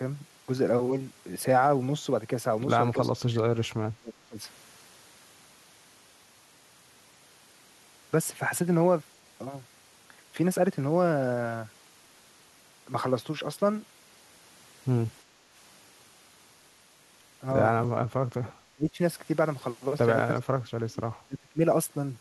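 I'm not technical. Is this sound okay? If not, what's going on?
No, not entirely. Two related problems come and go.

The main one is speech suppressed in double talk. The speaker's voice suddenly sinks, sometimes almost to silence, then comes back. This happens at 2.99 to 3.75 s, 4.0 to 4.38 s, 17.88 to 18.52 s, 18.73 to 18.98 s, 20.33 to 21.04 s and 21.27 to 21.61 s. Each drop lasts well under a second. The likely cause is both sides talking at once. The call software, which removes echo from the loudspeaker, then mistook this voice for echo and turned it down.

The second is background gated by the echo canceller. From 15.24 to 15.52 s, about a third of a second, the room sound dips a little and then returns. The same echo-removing software turned the microphone down while the loudspeaker was playing, and the quiet background went with it.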